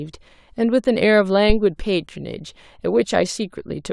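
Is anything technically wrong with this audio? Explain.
Yes. From 1.50 to 1.62 s a phantom power thump interrupts the speech: a supply switching on or off on the live input sends a voltage step through the coupling capacitors, producing a deep thud peaking near about -5 dBFS and decaying in roughly 27 ms.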